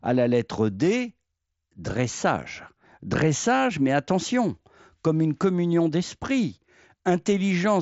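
No technical faults are present in this speech clip, which comes through the Bluetooth mSBC headset codec with nothing above about 7.7 kHz.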